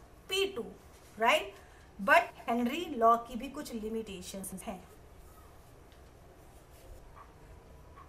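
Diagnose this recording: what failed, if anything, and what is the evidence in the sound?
DAB burbling at 0.72 to 1.23 s and 7.19 to 7.71 s points to the reception and codec stage. Short blips of noise in single sub-bands, and sub-bands jumping in level for up to a frame, come from bit errors of around half a percent slipping past error correction into the MP2 data.

Chunks out of order at 2.30 to 2.48 s, 4.44 to 4.61 s and 5.80 to 6.14 s point to the buffer stage. Each jumbled moment is an 85.33 ms chunk played late, by one chunk twice and by three chunks last, leaving three hard joins.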